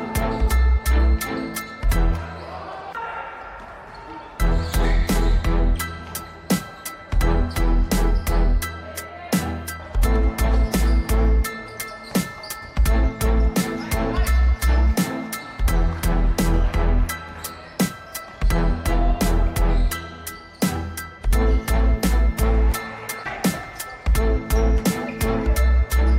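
No technical faults are audible.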